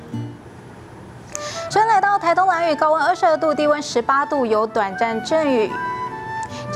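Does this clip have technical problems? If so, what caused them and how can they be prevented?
Yes. There is one sharp click at 3.29 s, from dropped samples. The likely cause is a couple of samples going missing from the stream, a tiny fraction of a millisecond. The waveform jumps straight from one value to a later one. That step is too brief to remove any sound, so it is heard only as a single click. It shows as a thin vertical line across the spectrum. To prevent it, use larger buffers and keep the capture path free of other CPU load so no samples are skipped.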